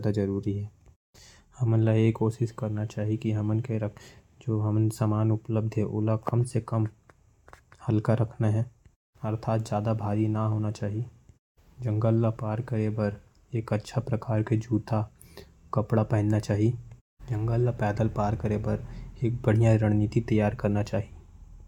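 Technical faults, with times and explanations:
No technical faults can be heard in this speech recording. There is nothing to list.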